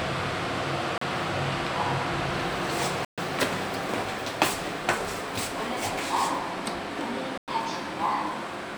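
Three brief gaps cut the sound to silence: at 0.98 s for 35 ms, from 3.05 to 3.18 s for 129 ms, and from 7.38 to 7.48 s for 101 ms. This is most likely a Bluetooth stall, where radio interference delayed packets until the headphones' buffer emptied and playback paused. Each gap is fully silent and ends abruptly when the audio resumes, unlike a codec dropout, which would leave smeared or warbly fill rather than clean silence.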